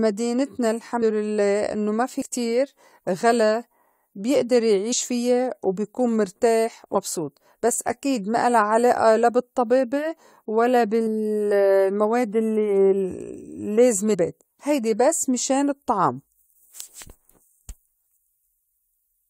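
Speech that lurches forward with brief smeared blips at 1.01, 2.21, 4.92 (between "غلا بيئدر" and "فيّا وبيكون مرتاح"), 6.94 (after "فيّا وبيكون مرتاح"), 11.06 and 14.13–14.15 s (before "هيدي بس مِشان الطّعام"). These are compressed frames skipped: whole 21.3 ms frames went unplayed, dropping about 0.15 s at 1.0 s, around a tenth of a second at 2.2, 4.9, 6.9 and 11.1 s, and about a fifth at 14.1 s. Because the frames overlap, each join smears rather than clicks.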